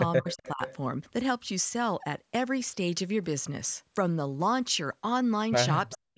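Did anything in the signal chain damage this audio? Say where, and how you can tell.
Yes. Speech suppressed in double talk at 0.21 to 0.62 s and 5.95 s to the end, dipping roughly 20 then 40 dB, likely the call's echo canceller ducking its own talker along with the loudspeaker echo.

Echo leak at 0.29 to 0.5 s, 0.67 to 0.76 s and 5.9 to 5.98 s: a faint copy about 390 ms late, likely loudspeaker echo the canceller missed.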